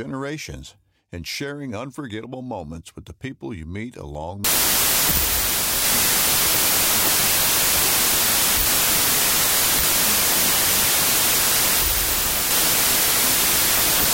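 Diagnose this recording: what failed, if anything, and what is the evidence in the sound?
Wrong sample width in format conversion. From 4.44 s, after "people you meet along", loud noise buries slowed, lower speech. Packed 24-bit data read as 16-bit.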